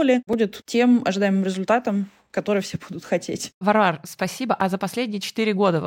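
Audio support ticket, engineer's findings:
Block of digital silence at 0.33 s, just before "тем ожидаемым результатом который": about 2.9 ms dropout, hard edges, heard as a tick. Second at 4.61 s, about 5.8 ms, also a tick. Lengths fit 128- and 256-sample buffers. Probable component: output buffer not filled in time, so zeros were written.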